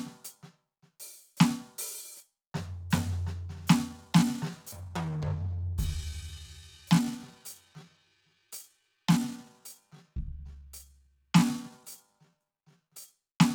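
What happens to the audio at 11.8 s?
At 11.8 s the music is inside a time-stretched section running from 3.85 to 13.09 s, slowed to 0.7x with pitch held, likely by repeating short segments, so it drags.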